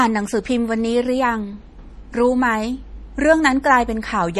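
Throughout the speech, nothing sounds above 14.5 kHz and a plainly audible watery swirl persists, likely MP3 compression starved of bits, consistent with about 40 kbps.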